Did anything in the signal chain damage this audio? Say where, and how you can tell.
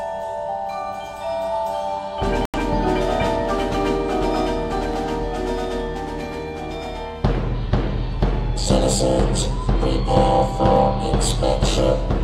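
Yes. At 2.45 s the sound cuts to silence and comes back at 2.59 s. This is a digital broadcast dropout at the reception and codec-frame stage. The receiver stopped getting frames that passed their checks and muted until valid ones arrived again. The gap of about 85 ms fits two lost frames. It differs from a buffer fault because there is an actual stretch of silence, and the programme resumes further on with the missing material gone.

At 10.76 s there is an abrupt jump in the sound and no silence at all. About 10 ms of audio has vanished and the two sides are joined directly. That points to the capture driver or buffer stage, most likely a dropped buffer (overrun), where the hardware overwrote samples before the software collected them. Unlike the dropout, nothing goes quiet. The audio simply skips ahead.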